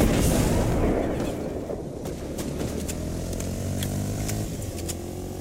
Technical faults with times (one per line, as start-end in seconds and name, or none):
0.72-0.75 Bluetooth stutter